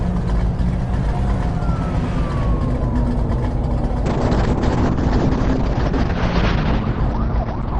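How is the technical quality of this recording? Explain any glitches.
The recording degrades partway through because of a call bitrate drop. From 4.06 s to the end, the call's bandwidth estimate fell and the encoder was made to spend far fewer bits. The sound fits a fall from around 128 kbps to about 6 kbps. Coarser coding makes the audio rough and watery, and the top end narrows from 20 kHz to 6 kHz, so it turns muffled. The worst stretch lasts about 2 s.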